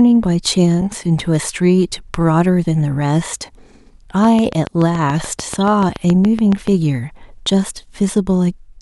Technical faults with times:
0.81 underrun with held sample
4.24-6.68 train of clicks

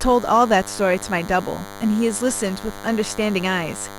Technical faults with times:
0.00-3.99 DECT cordless phone buzz

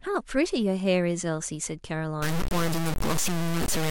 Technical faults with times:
2.22-3.91 low bit depth without dither

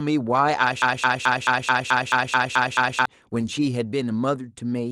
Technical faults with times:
0.82-3.06 broken-record loop

